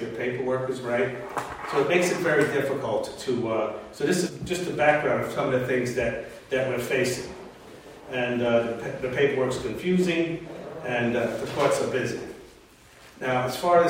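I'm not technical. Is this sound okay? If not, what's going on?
No, there's one glitch at about 4.25 s to 4.30 s. It's compressed frames skipped: a small chunk of audio, roughly a fifth of a second, never got played, so the sound jumps ahead.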